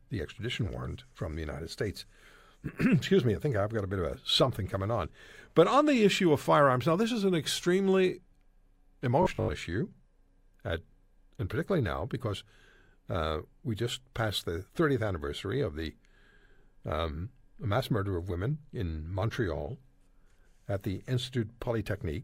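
At 9.22 s the speech turns robotic for 0.3 s, until 9.52 s. A rigid, metallic buzz at 50 Hz sets in. The likely cause is repeated short buffers. About half the audio is skipped, and a 20 ms slice loops instead.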